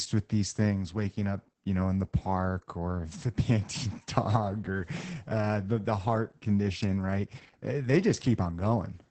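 Speech that sounds muffled, hoarse and faintly robotic throughout, with nothing above 8.7 kHz: heavy Opus voice compression in wideband SILK mode, consistent with roughly 10 kbps.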